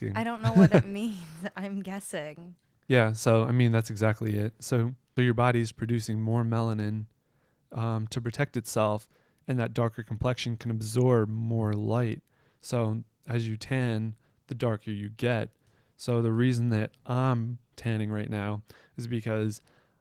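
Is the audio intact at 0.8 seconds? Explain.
Yes, at 0.8 seconds the speech is intact, with no fault at that moment.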